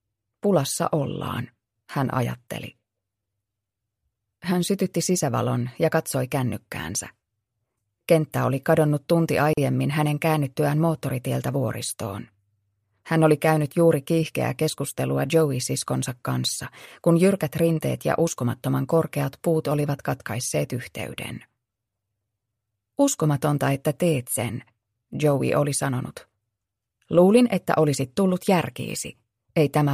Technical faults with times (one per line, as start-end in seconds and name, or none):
9.53-9.57 gap at a join of encoded pieces